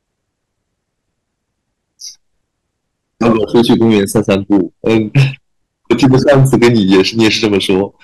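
Speech that turns harsh and fuzzy on its louder sounds from 3.23 to 5.24 s and again from 5.91 to 7.82 s, with the grit slightly heavier in the second stretch. This is hard clipping: the level there runs about 10 dB and then about 12 dB past what the stage can pass, so the peaks are sliced flat, and those squared-off tops spray harmonics high up the spectrum, heard as buzz riding on the speech.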